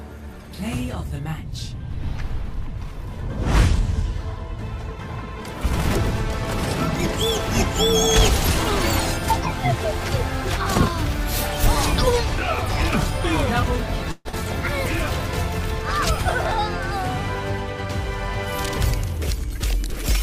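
At 14.11 s the audio stops arriving properly until about 14.36 s, and it's a classic long network dropout. The last bit of sound gets stretched into a fading buzz for roughly 213 ms, then there's a brief 20 ms gap of near silence before the audio picks up again. About 120 ms of material just never comes back, and the timing shifts by around 50 ms afterwards. The likely cause is packets lost or held up in transit, with the receiver concealing the hole.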